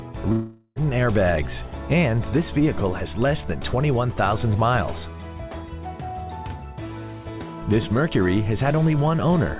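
Right near the start, from about 0.32 to 0.79 s, the audio cuts out for nearly half a second, most likely a long network dropout. The receiver covers almost all of that gap by stretching the last bit of sound into a fading buzzy tail, leaving only a sliver of silence before the audio picks up again, with the lost stretch simply gone. The narrow band, with nothing above 4 kHz, fits a G.711 mu-law call path.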